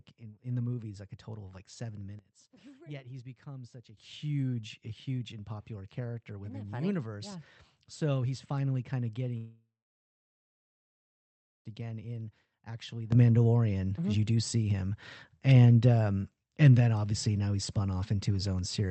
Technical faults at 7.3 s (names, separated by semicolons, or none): none